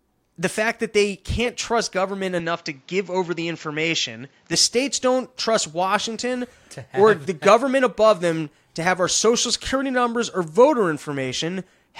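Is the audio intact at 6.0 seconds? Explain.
Yes, the speech at 6.0 seconds is intact, with no dropout, click, distortion or other fault at that point.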